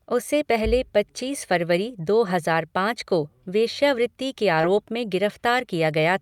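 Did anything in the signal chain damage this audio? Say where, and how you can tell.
Yes. The network stage dropped audio in a short concealed packet loss between 4.61 and 4.65 s. About 20 ms of the speech never arrived in time, and the receiver's decoder synthesised roughly 19 ms to cover it, extending the preceding sound before crossfading back into real audio. It is heard as a brief smear or wobble. On a spectrogram the harmonics or noise band run unnaturally steady across that gap, and the waveform shows a repeated cycle or shaped noise where detail should be.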